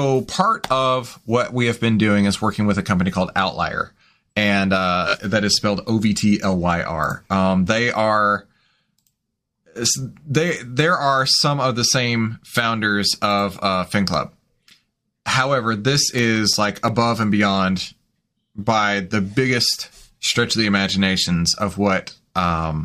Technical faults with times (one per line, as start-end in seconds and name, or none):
5.07-5.15 repeated frames
11.40 repeated frames
16.18-17.23 CD scratch ticks